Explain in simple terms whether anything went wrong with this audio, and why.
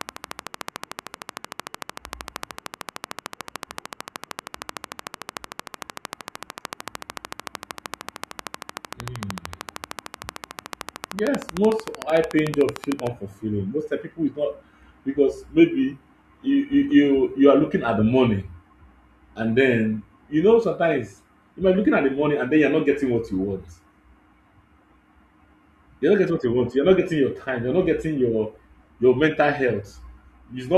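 A train of clicks runs from the very start, at 0.01 s, until 13.08 s. It is a steady ticking of about 13 clicks per second, evenly spaced and all alike, some two hundred in all, loud enough to stand out above the speech and audible in the pauses too. Something was likely feeding an electrical pulse into the recording over and over, such as interference from nearby equipment or a faulty connection or power supply.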